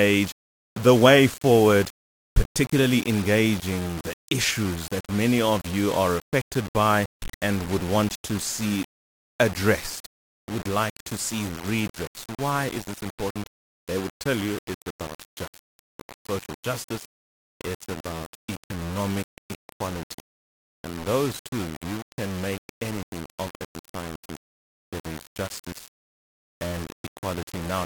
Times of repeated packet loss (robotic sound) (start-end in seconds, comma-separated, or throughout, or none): none